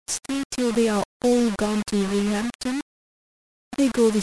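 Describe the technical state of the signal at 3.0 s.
Low bit depth without dither is present at 3.0 s, as it is across the whole clip. The speech has likely been rounded to very few amplitude steps with no dither, so the rounding error tracks the waveform instead of spreading as steady hiss. That error sits only roughly 15 dB below the signal, which points to about 4 bits. It sounds like a coarse, grainy distortion that shifts with the speech, harshest on the softer parts.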